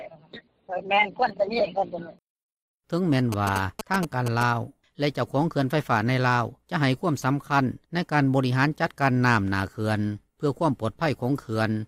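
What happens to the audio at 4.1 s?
A galloping dit-dit-dit of short buzzes at about 217 Hz, only a little quieter than the main sound, runs from 3.32 to 4.43 s. These are GSM signalling bursts: a nearby 2G phone's short radio bursts, rectified by the audio circuit.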